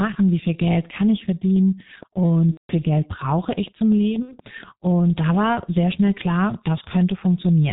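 The whole recording has passed through the G.723.1 codec, and the damage is heavy. The codec works in 30 ms frames at a very low rate, which fits a 6.3 kbit/s stream. It discards everything above 4 kHz and tracks the vocal tract only coarsely, so the speech sounds muffled and hoarse throughout, with sibilants and stops smeared together.

From 2.52 to 2.75 s, VoIP packet loss is concealed by the speech codec. About 180 ms of audio never arrived, which fits six consecutive 30 ms frames. The decoder filled the gap by repeating its last pitch and spectral shape at falling gain. The speech there stretches into a fading tone or coloured noise that is muted from the third lost frame on, and it stays thin for a moment after real audio resumes.

A shorter dropout of the same kind runs from 4.22 to 4.39 s. Only about 60 ms was missing, consistent with two frames, so the concealment is briefer: a short smeared patch with some weakness just after.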